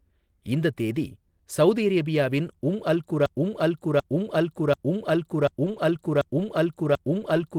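At 3.26 s the speech falls into a broken-record loop: a 0.74 s fragment repeats exactly, back to back, until the clip ends. This is likely a stalled player or stream. On a waveform the identical 0.74 s block tiles across the rest of the clip, and the spectrogram shows the same pattern stamped repeatedly.

From 5.46 s to 7.36 s, scattered short gaps occur inside that loop. About four brief holes, the longest roughly 20 ms, were patched by stretching the preceding sound. They are heard as small ticks or smears. On a spectrogram they appear as thin vertical seams or smeared slivers breaking the repetition.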